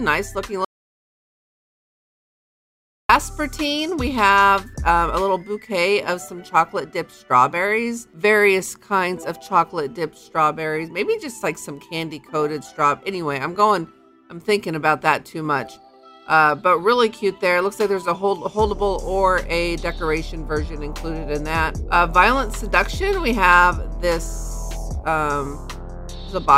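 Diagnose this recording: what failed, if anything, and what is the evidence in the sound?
The failure is an audio dropout to silence on the input side. At 0.65 s the sound cuts off abruptly and the track holds digital silence, with no room tone or noise floor at all, until 3.09 s, when it resumes mid-flow. That is about 2.45 s of material gone. The cause is likely a lost input connection or mute upstream of the recorder, which kept writing silence while the source was absent.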